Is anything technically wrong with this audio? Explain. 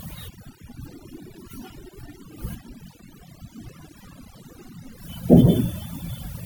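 Yes. Throughout the speech, overdone noise removal is audible. A noise reducer set too aggressively cuts individual frequency bands whenever they sit close to its noise estimate. Soft parts of the voice get removed too. The background drops and breaks up into twinkling specks.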